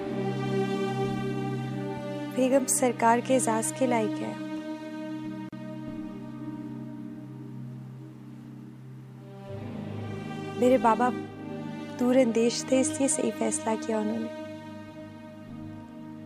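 A gap at a join of encoded pieces opens at 5.49 s and lasts about 37 ms, to 5.53 s. Separately encoded sections were butted together with each run's start delay and end-frame padding left in, so the continuous sound drops out abruptly, smeared at the edges, then resumes where it left off.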